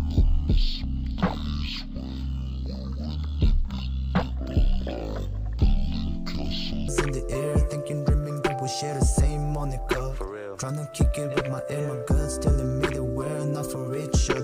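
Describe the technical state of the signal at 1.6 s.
At 1.6 s the audio plays at half speed and a full octave low, with a faint mirrored copy in the upper half of the spectrum. This is stereo read as mono, from 0.0 to 6.88 s: interleaved left and right samples are played in sequence as one channel.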